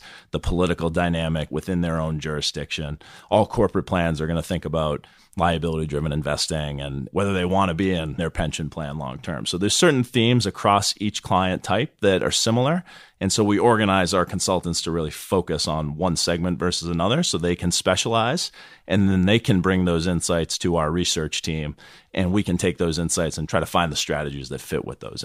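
No dropouts, clipping, glitches or other technical faults can be heard anywhere in the recording.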